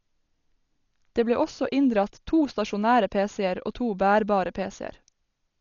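Dolby Digital compression runs throughout the speech, and the damage is heavy. Nothing is present above 7 kHz, so the voice sounds dull and boxed in, and a rough, fluttering noise clings to voiced sounds. The likely cause is an AC-3 style encoder starved of bits, which fits a rate near 40 kbps: it cut the band short and left many frequency lines without mantissa detail, so the decoder filled those gaps with dither noise.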